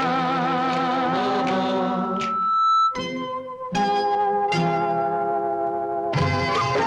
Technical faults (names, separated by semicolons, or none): loudspeaker feedback squeal